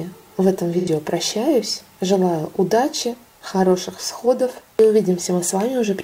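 AAC frame loss with concealment occurs from 0.78 to 0.88 s. A gap of roughly 85 ms, consistent with two consecutive AAC frames, went missing, and the decoder filled it by reusing the last good spectrum, producing a brief smeared, noisy patch.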